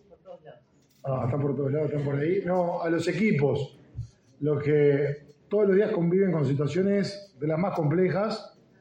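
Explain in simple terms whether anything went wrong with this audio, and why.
Nothing went wrong here: the signal stays steady and intact throughout, with no technical faults to point to at any moment in the recording.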